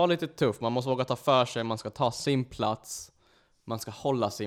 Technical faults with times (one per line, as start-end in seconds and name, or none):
0.52-2.28 Bluetooth SBC bit pool drop